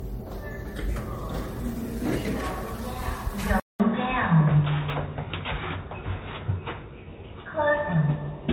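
Everyday sounds carry a swirly, smeared, hollow quality throughout, with softened attacks. This is generation loss, likely from repeated MP3 coding at 64 kbit/s, each pass re-quantising on a shifted frame grid. A single encode at that rate would sound band-limited but not this watery. At 1.48 s and again at 4.9 s there is a jump in the sound, roughly 20 ms skipped, and no gap. That likely marks a dropped buffer (overrun), where unread samples were overwritten and the neighbouring audio was spliced together, rather than a dropout, which would leave silence. From 3.6 s to the end, after a 200 ms silence, the sound turns dull and boxy. The level also shifts by about 5 dB, and a fresh noise floor sits about 50 dB below the signal. These point to the input being switched to a poorer device rather than to a simple filter, which would keep the original noise and level.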